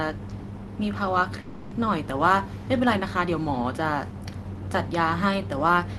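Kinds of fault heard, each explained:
Long network dropout: At 1.41 s the speech gives way to a smeared buzz that fades out, the receiver stretching the last bit of sound it had to cover the gap. That fill runs for about 0.3 s with no actual silence, then real audio returns at 1.73 s with roughly 300 ms of the original simply gone. A burst of packets lost in transit is the likely cause. The codec's top end, rolling off around 12 kHz, stays unchanged either side.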